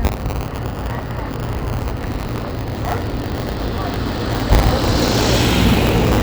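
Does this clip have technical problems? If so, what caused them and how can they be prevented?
Yes. Buffer tearing runs through the whole clip. A rough, robotic rattle at 100 Hz rides on the sound and is present only while there is signal. The writing program and the hardware reading the ring buffer have drifted out of step. They cross inside every period. A small slice of each buffer replays audio from about 20 ms earlier, joined hard on both sides. The 100 Hz rate fits a period of about 10 ms. Prevention: keep the write position safely ahead of the read position, with enough headroom to absorb scheduling delays.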